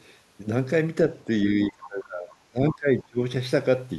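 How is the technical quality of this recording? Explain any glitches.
The recording has one clear glitch, around the middle of the clip.

Speech suppressed in double talk, from 1.66 to 3.2 s: the speech dips for about a second in total, falling by around 25 dB at its deepest. The likely cause is an echo canceller attenuating the near talker while the far side spoke simultaneously.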